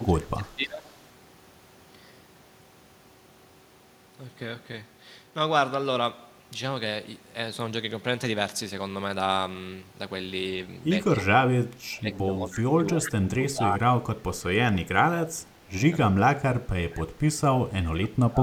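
From the start to 0.87 s the speech is pulled down by about 20 dB. That is speech suppressed in double talk, likely because the echo canceller heard both sides at once and attenuated the near talker along with the echo. The same dips return at 11.19 to 11.26 s, across most of 11.62 to 15.7 s (up to about 25 dB), at 16.04 to 17.4 s, and from 17.92 s to the end. Nothing is added to the sound. The talker's own voice loses level.

Echo leak is the opposite case, heard at 13.06 to 13.1 s and 17.56 to 17.61 s. A faint scrap of voice arrives 313 ms late, about 15 dB below the speech. It is likely residual loudspeaker echo that the far end's canceller failed to remove. It is an extra delayed copy layered on top, rather than a loss of the original voice.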